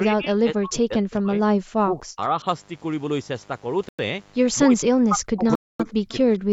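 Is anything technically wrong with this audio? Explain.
Yes. A mains buzz runs under the entire speech recording, sitting about 25 dB below the signal. It is a steady, raspy hum built on 50 Hz, with harmonics climbing into the kilohertz range, which likely comes from switching spikes entering through a dimmer, rectifier or unshielded lead. On a spectrogram it appears as evenly spaced horizontal lines across the whole clip.

Speech suppressed in double talk occurs at 0.02–1.41 s, 1.79–2.46 s and 4.64–6.30 s. The voice dips sharply, by as much as about 35, 30 and 40 dB, for roughly a second, a third of a second and a second of each stretch. The likely cause is an echo canceller that could not separate its own talker from the loudspeaker echo while both sides talked, and turned both down. The waveform shows the envelope suddenly collapsing and recovering in ragged pieces.

Bluetooth stalls cut the audio at 3.89–3.99 s (101 ms) and 5.55–5.80 s (243 ms). 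The sound drops to dead silence and then resumes, likely because interference delayed packets until the headphone buffer ran empty. Both the waveform and the spectrogram show clean, fully blank gaps.

An echo leak appears at 6.10–6.15 s. A faint copy of the voice, about 30 dB down and 241 ms late, slips through when a loudspeaker's echo canceller likely missed part of its own playback. On a spectrogram it shows as a weak, delayed ghost of the earlier speech energy. The empty band above 8 kHz comes from the call's normal microphone processing and is not a fault.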